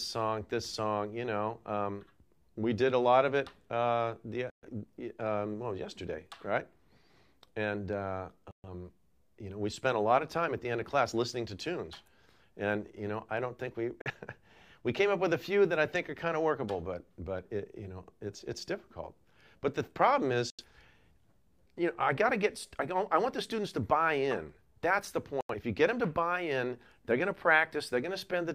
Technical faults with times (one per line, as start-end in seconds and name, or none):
4.50-4.68 digital broadcast dropout
8.51-8.68 digital broadcast dropout
14.02-14.11 digital broadcast dropout
20.50-20.65 digital broadcast dropout
25.41-25.55 digital broadcast dropout